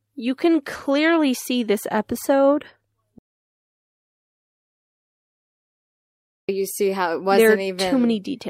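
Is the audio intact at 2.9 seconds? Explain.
No. At 2.9 s the speech sits inside a stretch of repeated timing corrections running from 0.03 to 8.08 s. The receiver keeps repeating short pieces, stretching playback to 96% speed and adding roughly a third of a second overall. These edits are heard, if at all, as slight hiccups and an unsteady tempo. On a waveform they show as tiny duplicated segments with abrupt joins, and on a spectrogram as brief repeated slices or faint vertical seams.

The cause is clock drift between sender and receiver. The sender's clock runs about 4% slow, so the jitter buffer keeps draining and must be refilled by those repeats, unevenly spaced and always in the same direction. The drift shows as a gradual lag building across the clip, not as one single visible mark.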